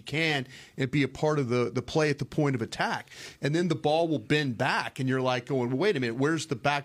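A speech recording with no technical faults to point to at any moment.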